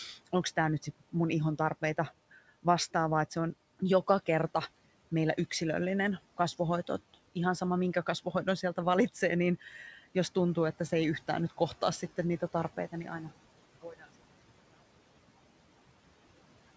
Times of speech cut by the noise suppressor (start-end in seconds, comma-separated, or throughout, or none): 9.61-9.74, 13.82-14.08